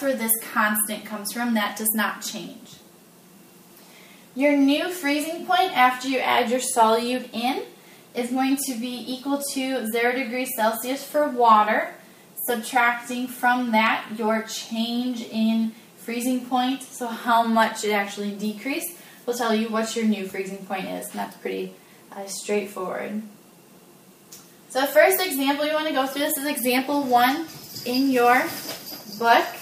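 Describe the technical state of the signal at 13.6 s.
At 13.6 s the player is hitting CD scratch ticks, running from 13.09 to 13.87 s. A blemish corrupts more data on each disc revolution than error correction can rebuild, so samples are concealed, leaving four brief ticks, each under a millisecond, of uneven strength.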